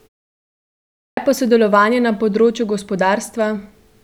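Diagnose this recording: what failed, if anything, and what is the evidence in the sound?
Playback stage: clipped start after a pause. After about 1 s of silence, "pa sodelovanje na področju" begins abruptly, its onset missing from 1.01 to 1.17 s while the sleeping output device wakes.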